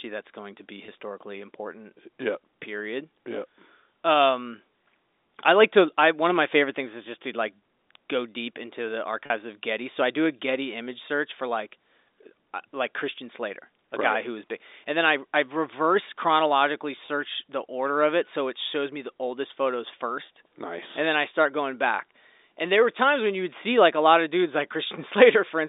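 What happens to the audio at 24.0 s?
Nothing goes wrong at 24.0 s: the speech carries on intact through that moment, still within the narrow telephone band of G.711 telephone coding.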